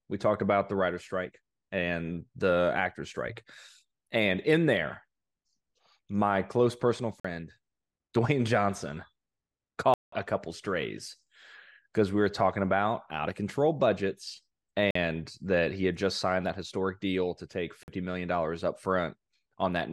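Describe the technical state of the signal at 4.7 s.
At 4.7 s the speech signal is intact, with no audible dropout, clipping, distortion or other fault at that moment.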